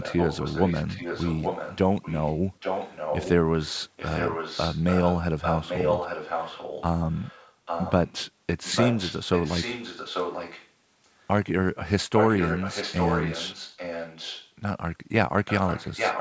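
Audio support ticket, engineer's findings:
Echo leak: delayed copy of speech trailing about 0.84 s behind, nearly as loud, at 0.0–3.3, 3.64–8.17, 8.63–10.69, 12.14–14.51 and 15.47–16.2 s; very faint at 11.03–11.25 s. Likely the far-end echo canceller. A discrete repeat, not diffuse room reverb.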